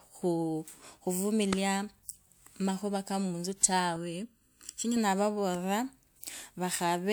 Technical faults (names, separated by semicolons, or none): channel delay (comb filtering)